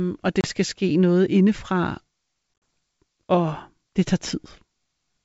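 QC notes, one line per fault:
0.41–0.48 s and 2.54–2.62 s, packet loss on an ADPCM call: the first gap drops about 30 ms of speech in a few lost packets. The second loses 60 ms scattered across 80 ms, its longest hole 40 ms, from several packets. Each hole is hard-edged silence, not a fade or repeated sound. The ADPCM decoder's predictor and step size drift from the sender's, so speech resumes with a click, distortion or a level jump. This settles within tens of milliseconds, over the clean G.722 wideband band.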